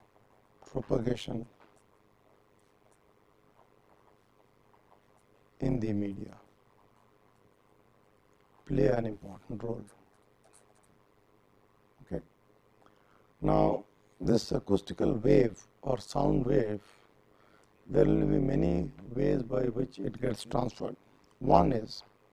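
Throughout the clip, overlap-add ripple: frames were windowed and recombined with an overlap whose gains fail to sum evenly, so the level dips by about 60 dB once per frame, around 100 times a second, giving a harsh, metallic, robotic buzz over the whole sound.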